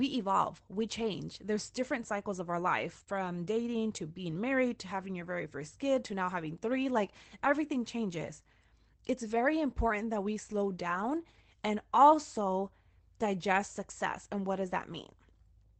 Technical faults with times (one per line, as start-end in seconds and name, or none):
2.99-3.10 lost packet rebuilt from error correction
3.03-3.08 short concealed packet loss
10.90-11.12 lost packet rebuilt from error correction